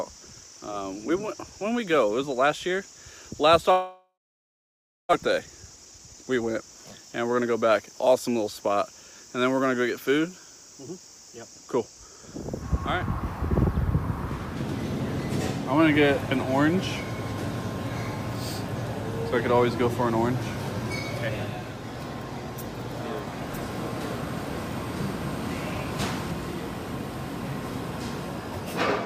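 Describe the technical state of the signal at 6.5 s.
At 6.5 s the signal is inside a jitter buffer speed-up running from 5.23 to 8.29 s. The receiver trims short pitch-period slices to drain excess buffered audio, removing around 0.4 s in total. Sound plays about 12% faster at unchanged pitch and feels hurried. On a spectrogram, harmonics stay level while events crowd closer together.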